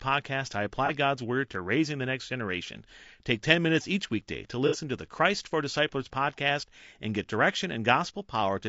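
Speech with plainly audible coding damage throughout: rough, grainy tone with noise between harmonics. It is likely low-delay AAC compression, AAC-ELD, fitting a rate near 32 kbps. AAC frame loss with concealment causes two smeared, noisy patches where the decoder filled gaps from earlier spectrum. The first is at 0.86 to 0.90 s, about 30 ms, one frame's worth. The second is at 4.67 to 4.76 s, about 60 ms, two frames, just after "minutes each weekday to" and before "to the".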